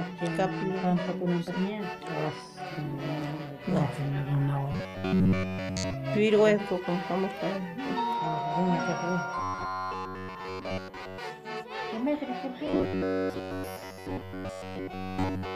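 Robotic sound from repeated short buffers hits 4.72–5.94 s, 9.38–11.18 s and 12.67 s to the end: a metallic 93.8 Hz buzz, likely from looped 10.7 ms segments, showing as evenly spaced harmonic stripes on a spectrogram.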